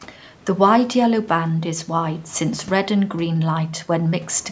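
Nothing's wrong here: the speech just carries the usual shape of a call microphone, with the deepest bass trimmed away and nothing above about 8 kHz, which is exactly what that processing is meant to do.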